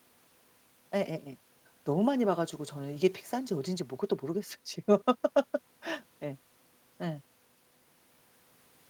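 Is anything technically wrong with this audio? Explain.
No, this speech recording shows no technical faults that need attention.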